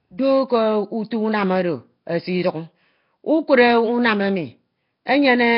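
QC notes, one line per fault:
Throughout: Nellymoser compression, likely from Flash-era Nellymoser Asao coding at a low rate near 22 kbps, starves weak bands of bits and fills them with noise, giving heavy rough, hissy haze and smeared, underwater speech, with nothing above 5.3 kHz.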